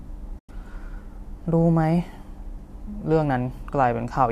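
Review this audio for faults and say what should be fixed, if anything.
AAC frame loss with muting opens a gap from 0.39 to 0.49 s, about 100 ms, which fits roughly ten short low-delay frames that were lost and then zeroed by the decoder. The stream is likely low-delay AAC with light coding roughness. Because the overlapping windows fade the speech out and back in, there is a soft-edged hole. On a spectrogram this shows as a clean vertical blank band across all frequencies, and the waveform tapers smoothly to flat silence and back. Adding forward error correction or packet redundancy on the transport would prevent these losses.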